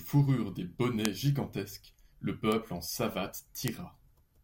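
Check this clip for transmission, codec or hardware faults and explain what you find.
Three bit error spikes occur in the speech. At 1.05 s, just before "gigantesques le", a tick peaks at about -5 dBFS. At 2.52 s, just after "gigantesques le", another peaks at about -11 dBFS. At 3.68 s, a third reaches about -5 dBFS. Each comes from a flipped bit. The sample value jumps by a power of two, then returns. The first sounds like a few corrupted samples. The others suggest a single sample. Each is a sharp, broadband tick unrelated to the speech.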